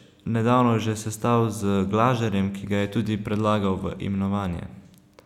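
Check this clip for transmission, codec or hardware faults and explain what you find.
One fault turns up, a single dropped sample at about 1.55 s, just after "nedavno že sestal". Roughly one sample, a few hundredths of a millisecond, is likely missing, so the waveform steps abruptly to a later value. That discontinuity produces one sharp click and a thin vertical line across the spectrum. No speech is lost.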